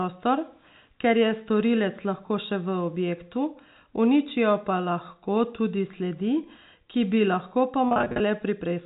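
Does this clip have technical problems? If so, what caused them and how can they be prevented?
Yes. Packet loss with pitch repetition appears from 7.88 to 8.20 s. About 200 ms of the speech goes missing in short gaps, none longer than 40 ms. The receiver repeats the last pitch period across each gap, so the sound turns briefly buzzy and held. A steadier network path with a larger jitter buffer would prevent this.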